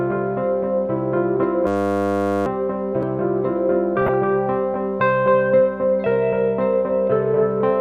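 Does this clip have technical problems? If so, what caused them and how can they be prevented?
Yes. From 1.67 to 2.46 s there is a system hang loop. The system froze while the sound hardware kept replaying one 10 ms stretch of its buffer, so the audio becomes a steady 100 Hz buzz and about 0.7 s of real sound is lost. On a waveform this appears as identical 10 ms cycles, and on a spectrogram as evenly spaced harmonic lines at multiples of 100 Hz. Preventing it means giving the audio thread real-time priority, fixing driver stalls, and having the hardware mute when its buffer stops being refilled.

From 4.02 to 4.14 s there is DAB burbling. Weak reception let bit errors, at a small fraction of a percent, slip past error correction into the MP2 data. A handful of frames then carry wrong samples, which put short blips of noise into single sub-bands. A spectrogram shows isolated short blips confined to single frequency bands. 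A better antenna position, a stronger signal, or a receiver that mutes or conceals badly corrupted frames prevents it.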